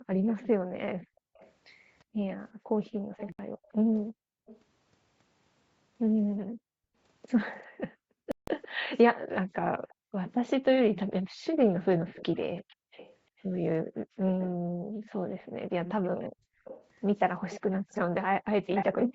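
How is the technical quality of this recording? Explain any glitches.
The recording has three recurring faults: the background is repeatedly pumped down, a delayed echo trails the talker, and two short silences break the audio.

Background gated by the echo canceller runs from 0.0 to 4.43 s and from 6.39 to 19.15 s. While the loudspeaker played, the echo canceller clamped the microphone hard, pushing room sound down by as much as about 40 dB. The ambience dips out in bursts, roughly 2 s of the first stretch and 4 s of the second.

Echo leak covers 0.27 to 4.6 s and 7.58 to 19.07 s. A faint copy of the speech follows 354 ms behind, roughly 20 dB below the main signal at first and about 15 dB below later. The likely cause is an echo canceller on a speakerphone that failed to remove its own loudspeaker pickup and sent it back.

Bluetooth dropout appears at 3.32 to 3.39 s (67 ms) and 8.32 to 8.48 s (160 ms). 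The audio cuts to silence, then resumes as though it had played on. The likely cause is wireless packets arriving too late for the headphones; the gaps fit about five and twelve lost packets.

The call's microphone processing also caps the band at 8 kHz, as expected for call audio.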